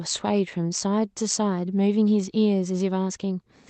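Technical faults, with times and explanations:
No technical faults can be heard in this speech. It has passed through a working call path whose top end stops at 8 kHz, which fits Opus at around 32 kbps.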